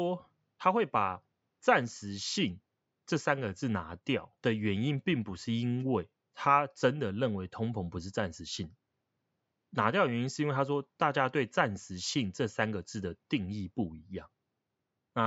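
A speech recording with nothing technically wrong with it, its faint room noise sitting about 52 dB below the speech.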